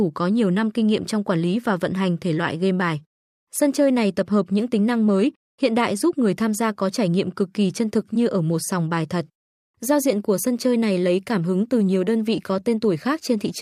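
No technical faults are audible.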